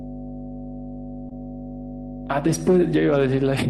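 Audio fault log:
throughout mains hum: a steady 50 Hz tone with low harmonics sits under the speech, strong at roughly 10 dB below it, from power-line coupling such as a ground loop. Its fixed pitch and unbroken presence set it apart from rumble or handling noise.
1.29–1.33 s short concealed packet loss: about 20 ms of audio never arrived, and the decoder extended the preceding sound to cover the hole before blending back. This is heard as a brief smear or wobble rather than a clean dropout, since no silence is left.
2.24–2.26 s lost packet rebuilt from error correction: a 20 ms stretch sounds rougher and noisier, which points to a single lost packet replaced by the low-bitrate copy carried in the next one. Unlike concealment, nothing is smeared, so the timing stays intact.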